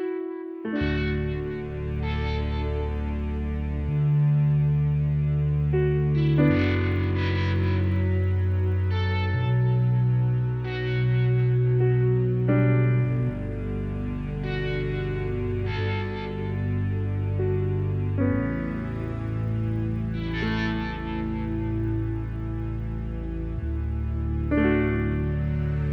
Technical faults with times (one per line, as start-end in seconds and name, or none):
0.00-25.93 resampler restarted on every block